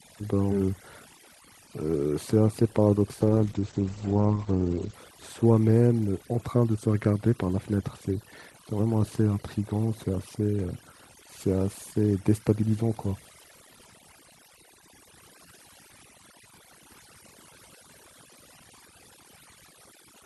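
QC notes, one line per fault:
Throughout: overdone noise removal, over-aggressive suppression gating individual bands near the noise floor, leaving a lowered background breaking up into twinkling specks.
3.21–5.01 s: call bitrate drop, encoder rate falling from 32 to 10 kbps and bandwidth from 20 to 8 kHz, giving coarse, muffled, watery speech before recovery.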